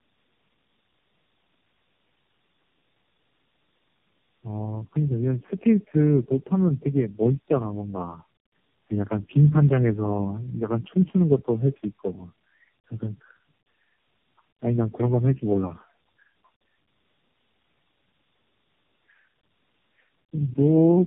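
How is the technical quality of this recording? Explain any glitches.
The quality is poor throughout. Tandem speech coding runs the full 21 seconds: the speech seems to have been decoded and re-encoded by about four narrowband speech codecs in turn, each degrading the last, leaving it rough, warbly and muffled with nothing above 3.8 kHz.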